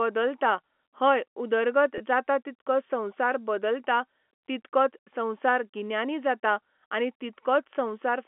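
At 1.98 to 2.00 s, packet loss with pitch repetition occurs. About 20 ms drops out, consistent with a single lost packet. The repeated pitch period sounds briefly held and buzzy.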